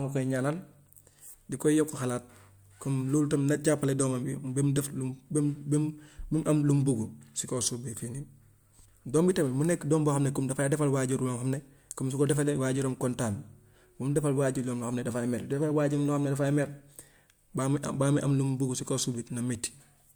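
No technical faults occur at any point in the recording.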